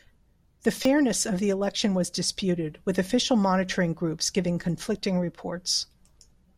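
At 0.83 to 0.85 s, just before "of the election was", a repeated buffer loops a 5.3 ms slice, fitting a 256-sample buffer, into a brief buzz rather than a silent dropout.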